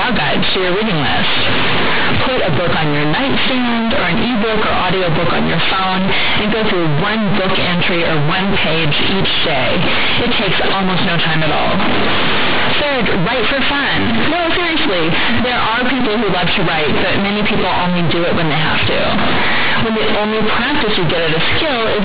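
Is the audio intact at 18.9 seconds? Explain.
No. Companded audio read as linear affects 18.9 s as it does the whole clip: mu-law bytes are played as plain 8-bit samples without expansion, so every sign change swings the output across half its range, giving loud, buzzy distortion and heavy noise in pauses.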